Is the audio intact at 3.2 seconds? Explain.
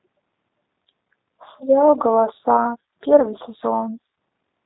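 No, it isn't. From about 3.20 to 3.27 s there's VoIP packet loss concealed by the speech codec. About 20 ms of audio went missing, which fits a single lost packet. The decoder patched the gap by carrying on from its last pitch and filter settings and turning the gain down as it went, so you hear a short buzzy or noise-like, smeared stretch that fades. Because each frame leans on the one before, it stays a bit weak and off for a few tens of milliseconds after real data comes back.

That's layered on the G.729 codec, which runs through the whole clip at 8 kbit/s, and its damage is plainly audible here. It rebuilds the sound from a vocal-tract filter, a pitch predictor and a handful of pulses per 10 ms frame, so nothing above 4 kHz survives. The result is dull and band-limited, with a rough, slightly synthetic edge.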